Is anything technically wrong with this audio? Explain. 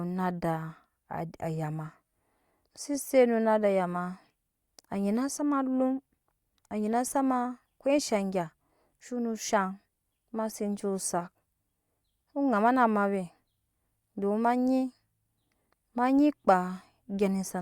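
No, nothing technically wrong stood out on listening to this speech recording.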